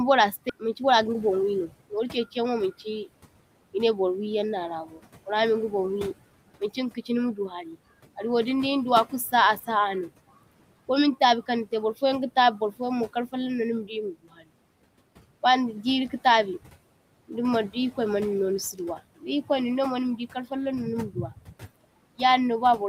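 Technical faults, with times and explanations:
Throughout, noise suppressor artifacts: the room noise, about 18 dB below the speech, is pulled down by about 18 dB between phrases. The spectrogram shows the noise floor pumping and leaving fluttering speckles.
0.49–0.51 s, skip ahead: roughly 0.4 s of audio is dropped with no fill. The waveform splices straight across, and the spectrogram shows an abrupt seam where the speech jumps forward.
0.63–2.60 s, jitter buffer speed-up: the audio plays at 111% speed at unchanged pitch, as pitch-period slices totalling about 0.2 s are removed. Harmonics stay level while the syllables compress in time.
4.86–5.01 s, 7.36–7.76 s, 14.14–14.51 s and 21.10–21.63 s, speech cut by the noise suppressor: the suppressor treats stretches of speech as noise. The first cut, just before "burra minga", drops about 10 dB. The others drop about 7, 19 and 12 dB. Each shows as a fading envelope.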